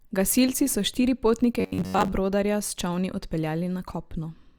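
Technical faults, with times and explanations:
1.60 to 2.13 s: robotic sound from repeated short buffers. The speech becomes a rigid metallic buzz pinned near 94 Hz that still loosely follows the words, likely from late audio being padded by looping roughly the last 11 ms, replacing most of the real signal.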